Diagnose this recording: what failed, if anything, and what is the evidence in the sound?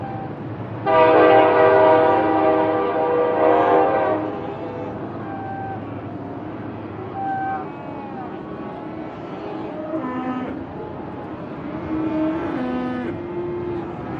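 Nothing failed in this recording of everyday sounds; there is no fault to diagnose. No stage from the wiring through to playback leaves any audible evidence of trouble.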